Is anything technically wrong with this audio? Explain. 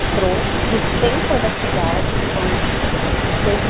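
Yes. An echo leak runs through the whole speech clip, from 0.0 s to the end. A second copy of the speech trails the original by about 0.26 s and is only slightly quieter, roughly 5 dB down, so the talking sounds doubled and smeared. The likely cause is a far-end loudspeaker whose echo canceller let its microphone pickup through and sent it back. On a spectrogram syllables' harmonic patterns repeat a quarter-second later, and the waveform shows bursts followed by quieter ghosts. The audio is band-limited near 4 kHz, which points to a narrowband call codec.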